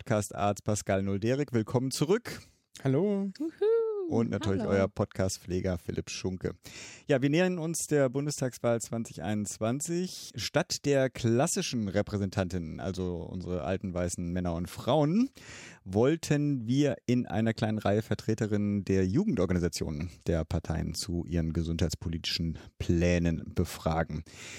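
A speech recording with no technical faults to point to. Nothing in it calls for a time or a cause.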